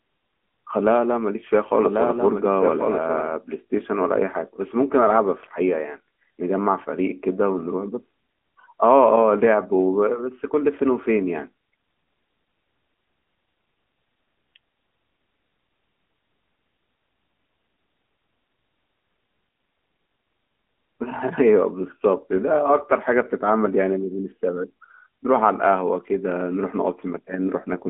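From the very start until 3.26 s, a doubled audio track is present: a second full-band copy runs roughly one second behind, about 5 dB quieter, with no decay or room colour. It likely comes from two copies held out of step, and it stops abruptly at 3.26 s.

Throughout the clip, the speech carries AMR narrowband mobile codec damage, fitting AMR-NB at about 10.2 kbps. The line band spans 200 Hz to 3.4 kHz with nothing above 3.7 kHz, and the low-rate vocal-tract model leaves a plainly audible buzzy, synthetic quality.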